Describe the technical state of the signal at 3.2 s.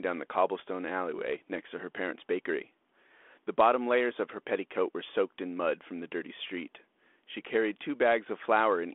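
At 3.2 s the signal is intact, with the speech passing through the 32 kbit/s G.726 ADPCM telephone path as expected and no fault at that moment.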